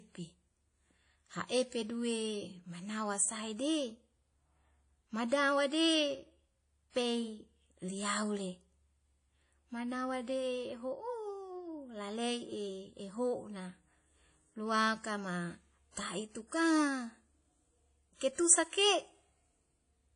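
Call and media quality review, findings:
Likely WMA compression throughout, low bitrate consistent with about 32 kbps: long transform blocks smear quantisation noise, giving ringing, washy speech, breathing hiss, and nothing above 10.1 kHz.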